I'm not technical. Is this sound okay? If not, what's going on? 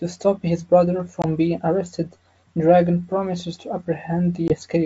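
No. There is packet loss on an ADPCM call: twice a single packet, about 20 ms, went missing, once at 1.22 to 1.24 s between "stop his brother" and "being arrested", and again at 4.48 to 4.56 s. The decoder briefly loses track, so a sharp gap is followed by speech that sounds slightly rough for a moment.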